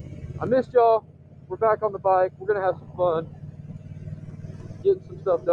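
A noise suppressor applied to music or sounds stays active throughout, pushing held tones and tails down by as much as around 20 dB, so the waveform envelope pumps and the spectrogram shows sustained energy breaking into flickering patches. Between 1.02 and 1.5 s, sound is cut by the noise suppressor, which misreads it as noise and drops it by about 6 dB, visible as a shallower, thinned stretch lasting roughly half a second.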